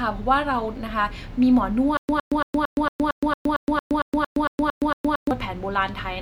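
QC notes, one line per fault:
1.97 to 5.31 s, stutter with silent gaps: the same 110 ms fragment of speech comes back 14 times, each followed by about 118 ms of dead digital silence, a steady 227 ms cycle. It's likely a stalled stream replaying its last chunk on each retry, so the speech for that stretch is simply missing.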